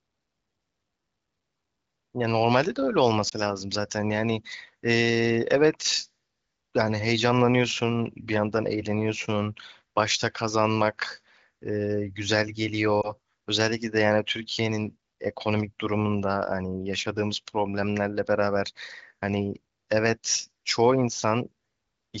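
Two short glitches in this speech, at 3.29 to 3.34 s and 13.01 to 13.11 s, are lost AMR speech frames. Each sounds like a single missing 20 ms frame. The AMR-WB decoder patched the gap by repeating the last good pitch and vocal tract settings at lower gain, giving a quick dip or warble before the voice recovers.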